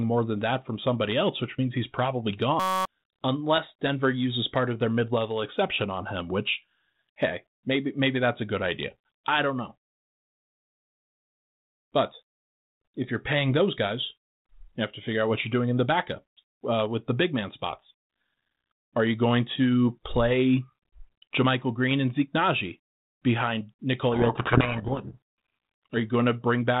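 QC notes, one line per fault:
2.60–2.85 s, system hang loop: right after "which means he's probably", a 5.33 ms piece repeats as a steady 188 Hz buzz, which fits a frozen 256-sample ring buffer. About a third of a second is lost.
24.12–25.95 s, codec payload misread: speech is buried in harsh distortion, which points to the G.726 code words being read in the wrong bit order.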